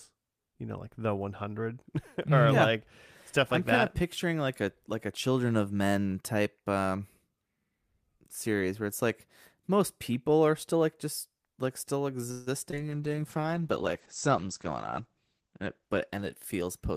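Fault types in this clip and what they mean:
call audio freeze: Packets were most likely held up in transit, so the jitter buffer ran dry just after "like just like still", from 12.31 to 12.49 s. The receiver stretched the last sound into a fading buzz for 153 ms instead of falling silent. When the packets arrived, the audio resumed where it had stopped. Nothing was lost, but the call now runs 153 ms later, and the stall is audible as a brief hum.
short concealed packet loss: About 20 ms of audio never reached the decoder in time, at 12.71 to 12.76 s, shortly after "like just like still". The receiver covered the hole with 15 ms of synthesised continuation of the preceding sound, then blended back into the real signal. The result is a quick smear or wobble rather than a clean dropout, and whatever fell inside that sliver is gone.
call bitrate drop: The bandwidth estimate collapsed, and from 12.77 s to the end the encoder was told to go from 40 kbps down to 11 kbps. 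At that rate Opus codes far more coarsely and narrows the audio band from 20 kHz to 8 kHz. The speech turns muffled and watery, losing its upper sparkle and sibilant detail. It stays at the lowest rate for 2.68 s.
jitter buffer speed-up: The jitter buffer ended up holding more audio than its target, as happens when delayed packets arrive together after a stall. To shed that excess latency the receiver trimmed short pitch-period slices repeatedly from 14.71 to 16.81 s, removing about 150 ms in total. The speech plays at 106% speed with its pitch unchanged, so that stretch sounds hurried.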